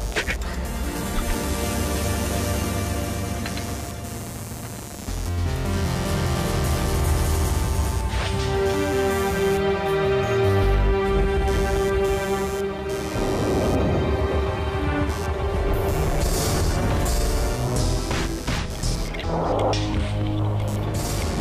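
A buzzing, chirping texture sits under the sound from start to finish, pulsing at around a hundred times per second and running roughly 15 dB below the wanted signal. It rises and falls with its own rhythm rather than following the audio. This is computer activity noise: shifting load on the processor, graphics card or mouse disturbs the ground that the audio circuit shares with them, and those fluctuations leak into the recording.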